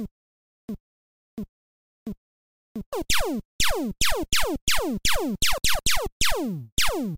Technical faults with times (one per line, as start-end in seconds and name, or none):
0.00-2.93 stutter with silent gaps